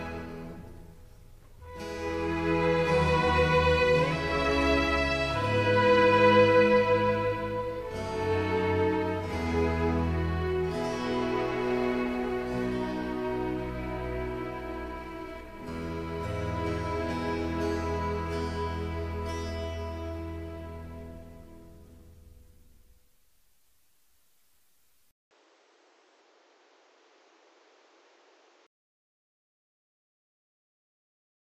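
Input switched to a poorer device, 25.11 to 28.87 s: after a 200 ms silence the sound turns dull and boxy, losing everything above 8 kHz. It drops roughly 5 dB and picks up new background noise, likely because recording jumped to a narrower-band microphone.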